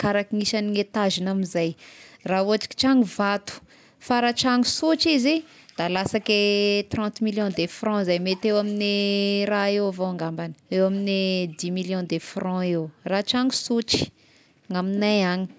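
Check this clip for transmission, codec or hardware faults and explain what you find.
Nothing in the speech points to a transmission, codec or hardware fault.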